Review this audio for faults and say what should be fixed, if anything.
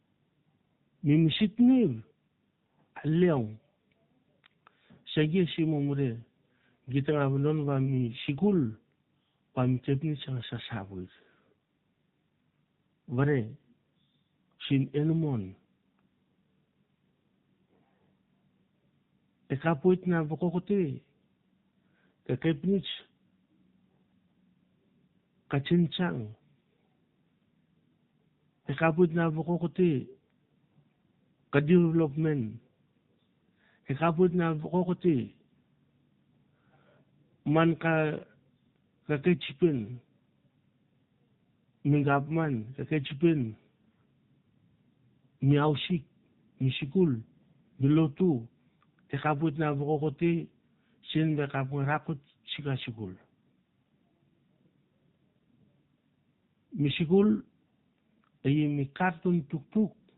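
The whole recording, start to finish, carries the sound of the AMR narrowband mobile codec (AMR-NB). Nothing above 4 kHz survives, so the speech sounds boxed in and dull. The codec rebuilds the voice from a vocal-tract model fed by a few pulses per 5 ms slice of each 20 ms frame. That leaves a plainly audible buzzy, synthetic edge, which fits a low mode of about 7.4 kbps. To prevent it, capture or transfer the call over a wideband path or a higher-bitrate codec instead of narrowband mobile coding.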